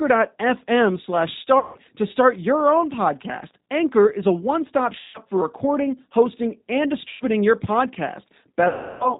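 G.729 coding runs throughout this speech clip, and its damage is plainly audible. At 8 kbit/s the voice is rebuilt from a vocal-tract filter, a pitch predictor and a few pulses per frame, leaving nothing above 4 kHz and a rough, synthetic edge. VoIP packet loss concealed by the speech codec breaks in four times: 1.6–1.8 s just before "to start your own", 5.0–5.2 s just before "for recording hosting and", 7.1–7.2 s just after "for recording hosting and", and 8.7–9.1 s. The decoder fills each gap of 110 to 320 ms by extending its last pitch and filter at falling gain, so the sound smears into a fading buzzy tone or coloured noise, and the voice stays weak briefly after each gap.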